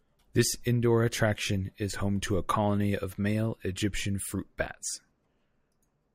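No technical faults can be heard anywhere in the recording.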